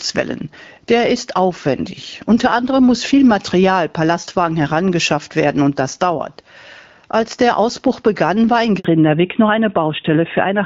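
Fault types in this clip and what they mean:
Gain pumping: The level swings by about 10 dB as the gain is pulled down under each louder stretch of speech. Loud and quiet parts sit close together, so the speech sounds squashed. This runs through the whole clip. The likely cause is microphone gain set far too high, with a fast limiter or compressor pulling the level down whenever the speech gets loud. It then lets the level climb back in the gaps.
Handover gap: Right after "begann war in", the sound fades out within a few tens of milliseconds and stays silent from 8.79 to 8.85 s, about 60 ms. This fits the call being switched from one network link to another, with no speech frames arriving during the switch. Whatever was said in that short window is lost. The audio does not return until the new link starts carrying sound.
Fallback to narrowband: From 8.85 s to the end, just after "begann war in", nothing above 4 kHz remains. 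Before that, the HD Voice stream runs clear with only light codec damage, at a wideband quality that fits AMR-WB at 12.65 kbit/s. After the handover, the speech turns duller and rougher. This points to a drop to an older narrowband codec, most plausibly AMR-NB at 12.2 kbit/s, which cannot carry the upper band.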